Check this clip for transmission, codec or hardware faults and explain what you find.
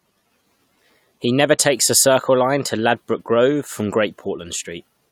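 No transmission, codec or hardware faults turn up anywhere in this speech clip. Nothing in the audio calls for further explanation.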